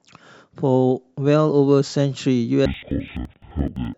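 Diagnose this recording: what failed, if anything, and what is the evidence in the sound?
The fault is at the sample-format conversion stage: interleaved audio read as planar. From 2.66 s to the end, the speech drops a full octave, 12 semitones, yet keeps its normal pace. It sounds doubled and choppy, stuttering at about 11.7 Hz. Each 85.33 ms block fits a 4096-sample buffer. Its alternating left and right samples were split into a first half and a second half, each played at half speed side by side.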